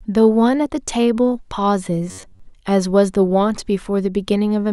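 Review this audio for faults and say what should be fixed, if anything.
From 2.09 to 2.40 s the speech turns into a rigid, metallic buzz. This is robotic sound from repeated short buffers. The buzz sits at about 94 Hz, which fits a chunk of roughly 10.7 ms being played over and over. Most of the real audio in that span is skipped, so the words survive only as a rough outline. The likely cause is new audio arriving too seldom, forcing playback to recycle its last buffer. To prevent it, enlarge the jitter or playback buffer and keep the audio thread from being starved.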